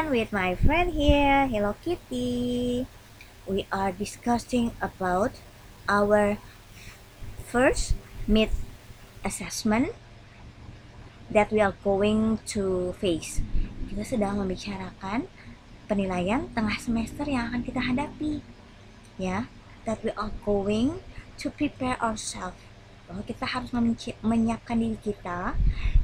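From 0.0 to 9.25 s, the audio was likely reduced to 8 bits and rounded without dither, a low bit depth fault. The error tracks the signal at about 35 dB below it, so quieter passages turn gritty and grainy, with distortion that shifts as the sound changes.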